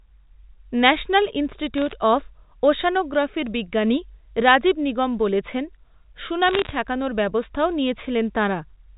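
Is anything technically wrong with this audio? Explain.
Yes. Bit errors on a digital phone line hit the audio twice, from 1.78 to 1.92 s, just before "অফ ওশ্যানোগ্রাফি’র বিজ্ঞানী রাজীব", and from 6.48 to 6.71 s, just before "ঠেকানোর ব্যবস্থাও". Flipped bits in the A-law telephone stream each corrupt one sample, and a wrong sign or high-order bit throws it far off. The error rate is a few tenths of a percent, about half a percent in the second burst. The result is short bursts of sharp ticking crackle laid over speech that is itself unchanged.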